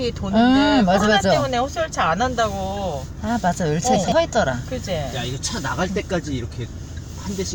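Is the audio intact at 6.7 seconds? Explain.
Yes, the audio is intact at 6.7 seconds, with no fault heard at that moment.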